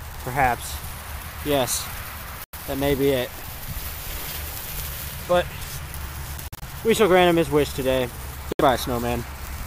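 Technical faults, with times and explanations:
2.44–2.54 s, 6.48–6.64 s and 8.52–8.61 s, corrupt frame muted: bit errors damaged compressed frames, the decoder rejected them, and the player filled the gaps with silence. The sound drops out abruptly for about 0.10, 0.16 and 0.09 s, spans that fit a few lost frames each, and resumes without any shift in timing.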